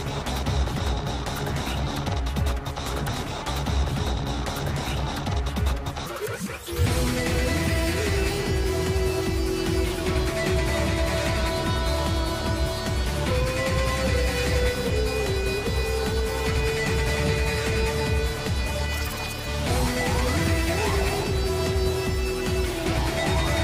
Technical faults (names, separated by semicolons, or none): none